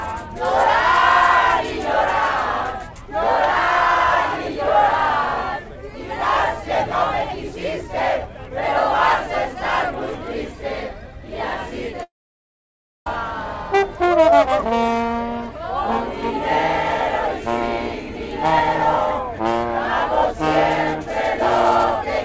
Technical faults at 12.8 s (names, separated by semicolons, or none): long network dropout